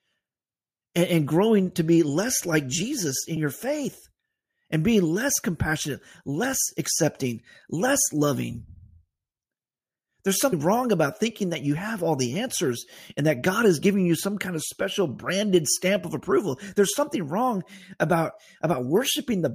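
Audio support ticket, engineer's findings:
Compressed frames skipped at 3.36 s and 10.52 s: speech jumps ahead, roughly 40 ms lost at the first and about 100 ms at the second. Decoder dropping missing or damaged frames.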